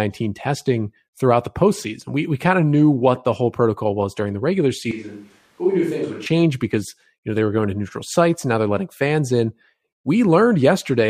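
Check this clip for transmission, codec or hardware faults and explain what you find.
A switch to a distant microphone runs from 4.91 to 6.26 s. The close pickup likely dropped out, leaving a farther microphone. The speech abruptly turns roomy and hollow, loses bass, falls about 5 dB and picks up faint room noise, then snaps back.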